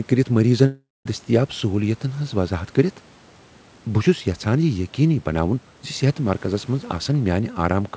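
Speech, with a long network dropout from about 0.66 to 1.07 s: the audio stream likely stopped arriving for roughly 0.4 s, so the receiver had nothing to play. It stretches the last sound into a fading buzz, and for about the final 0.21 s of the gap only silence or low noise remains before the speech resumes with that stretch missing. The call path's band limit at 8 kHz fits a G.722 codec at 64 kbps.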